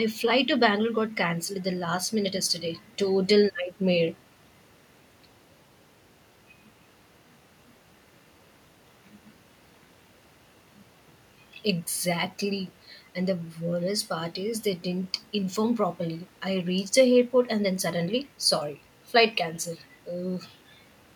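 A recording of speech, with nothing technically wrong to point to anywhere in it. No event stands out at any point that would call for a time or a cause.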